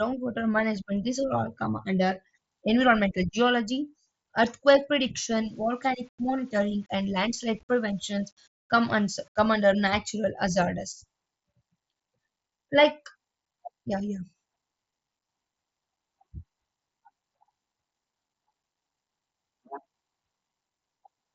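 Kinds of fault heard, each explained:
Low bit depth without dither: from about 5.29 to 9.66 s the speech turns grainy, with a rough distortion that rides along with the sound instead of sitting underneath it as steady hiss. The noise sits around 40 dB below the signal, which fits rounding to roughly 9 bits, likely from requantising with no dither, so quiet tails get gritty and the softest bits sputter. It's separate from the band-limited headset sound, which tops out near 7.7 kHz throughout.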